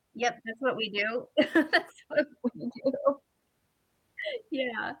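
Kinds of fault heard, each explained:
Clock drift between sender and receiver: The sending device's clock runs a few percent slower than the playback side's, so audio arrives slightly too slowly and the receive buffer keeps running low. Across the whole speech clip this produces small, irregular timing hiccups rather than one clean break. Unlike ordinary network jitter, the slips never reverse direction. They always lean the same way because the two clocks disagree steadily.
Repeated timing corrections: From about 0.42 s to 4.74 s the receiver keeps repeating tiny slivers of audio to fill the gap left by the slow sender. This stretches the passage by roughly a tenth of a second and leaves it playing at about 98% speed. The result sounds like a faintly uneven, dragging tempo with slight stutters, not a pitch drop. That separates it from a plain resampling or playback-rate error.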